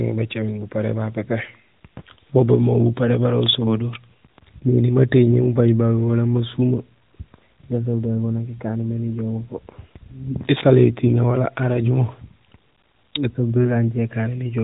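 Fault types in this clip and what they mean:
There are no fault types in this clip, so there is nothing to explain.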